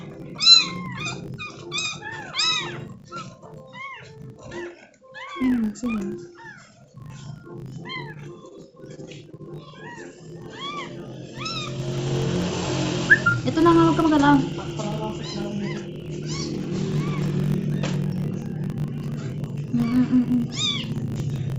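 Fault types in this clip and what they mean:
filter restarted on every block: a filter loses its memory at each block boundary and restarts from silence, so a small transient marks every block, here a 50 Hz buzz, one tick every 20 ms, that rises and falls with the signal level, unlike steady mains hum.
repeated packet loss (robotic sound): from 8.95 to 9.41 s, several short holes follow in quick succession, the longest about 26 ms, each patched by stretching the previous sound, giving a choppy stretch with pieces missing, unlike one isolated dropout.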